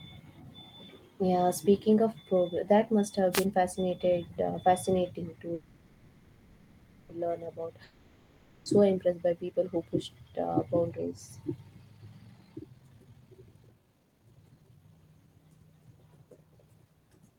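At 3.32 to 3.46 s there's a wireless microphone noise hit, a quick swish of static lasting about a seventh of a second. The analogue FM radio link faded as reflections cancelled each other, so the receiver's own noise rose up briefly before the signal recovered. It's short and hissy, the classic radio-mic dropout sound.

Next, from 5.54 to 7.10 s, there's a call audio freeze. The speech stops and the last bit of sound gets stretched into a buzzy hiss that fades down to a low steady noise for about 1.55 s. The likely cause is packets held up in transit, which left the jitter buffer empty, so the receiver padded the gap with that fill. When the packets arrived, the speech picked up exactly where it left off, with nothing lost, just a pause inserted.

Shortly after, at 7.84 to 8.67 s, comes a long network dropout. It sounds similar at first, with the last sound smeared into a fading buzz and then low steady noise for about 0.82 s. 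The difference is that when the speech returns it has jumped ahead, skipping roughly 0.83 s that never played. Those packets likely never arrived at all, so that stretch of speech is simply gone.

Then the jitter buffer speed-up kicks in, twice. From 9.36 to 10.09 s it's mild, running at about 107 % and trimming roughly a twentieth of a second in total. The pitch stays put, but the speech is subtly rushed. From 12.21 to 16.86 s it's much more obvious, at 132 % speed, with around a second and a half cut out. The buffer was holding too much, so the receiver kept snipping out tiny pitch-period slices to catch up. The speech sounds noticeably hurried, though the pitch doesn't change.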